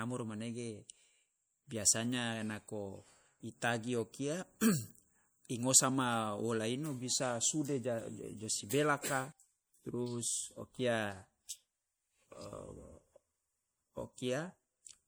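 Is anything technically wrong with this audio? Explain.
Yes. Throughout the speech, the sound is watery and swirly, with metallic chirps on s sounds and smeared onsets. The likely cause is MP3 compression at a low bitrate, consistent with about 64 kbps: the encoder cuts the treble and drops weak frequency lines, which flicker on and off between frames.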